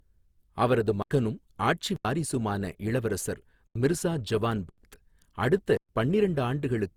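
From start to finish the speech sounds swirly, smeared and hollow, with softened consonant attacks, more damage than a single encode would leave. This generation loss was likely caused by repeated lossy re-encoding, a few passes of something like Opus at 48 kbit/s.

Blocks of digital silence cut in at 1.02 s, 1.96 s, 3.67 s (just before "மிர்சா ஜவான்"), 4.69 s (just after "இளவரசர் மிர்சா ஜவான்") and 5.77 s. Each is a hard dropout. The first four last about 85 ms, fitting a 4096-sample buffer that wasn't filled in time. The last lasts 118 ms.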